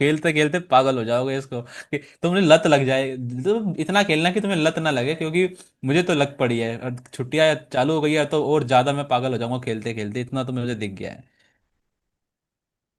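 No technical faults can be heard in this speech recording. Nothing in it needs a timestamp or a repair.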